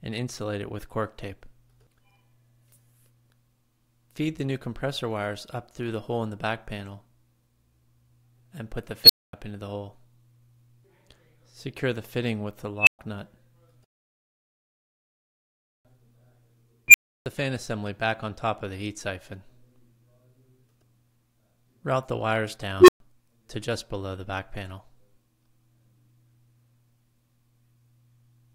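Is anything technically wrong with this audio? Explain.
Yes. An unstable filter fires at 9.04–9.33, 12.79–12.99, 16.88–17.26 and 22.80–23.00 s. A recursive filter with bad coefficients rings up over 53–81 ms into a loud squeal, near 4 kHz, 3 kHz, 2 kHz and 400 Hz, clips, overflows, then drops to 120–320 ms of silence until it resets.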